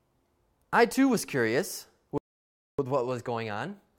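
A playback stall begins at 2.18 s, right after "I too was curious": the speech cuts out mid-flow and the output stays silent for about 0.61 s, until 2.79 s. The likely cause is the player running dry of buffered data, or its output thread being blocked, so nothing reached the output until it recovered.

Time-compressed catch-up follows from 2.79 s to the end of the clip at 3.99 s. To work off the backlog built up during the stall, the player drops short slices of the signal and cross-fades across each gap, so the speech runs about 1.15 times faster while keeping its normal pitch. It sounds hurried.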